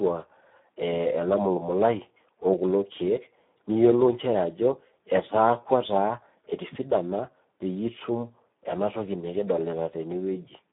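Speex codec damage runs through the whole clip. The speech is squeezed into a narrow telephone band of about 150 Hz to 3.7 kHz, with nothing above 3.8 kHz. Too few bits reach the excitation, which fits an 8 kbps setting. The result sounds hoarse and noisy.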